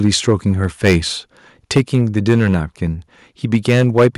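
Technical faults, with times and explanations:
0.04–0.96 s, 1.76–2.56 s and 3.53–4.08 s, microphone overload: The loudest syllables in the speech take on a harsh, crackling edge, with peaks flattened at the converter's limit. This is likely input gain set too high, driving peaks about 9 dB, 8 dB and 7 dB past the converter's limit. The waveform tops are sheared off, which adds distortion products. The last stretch clips the most, with around 5 percent of samples cut against a few percent earlier.
1.78 s, microphone volume stepped down: Just after the second overloaded stretch begins, the speech and the background both drop by about 2 dB in a single abrupt step instead of a gradual fade. The call software has likely lowered the device's input volume in one move in response to the clipping. The cut is small, so the level falls only slightly, and the overload that starts at 3.53 s shows the peaks still exceed the limit afterwards.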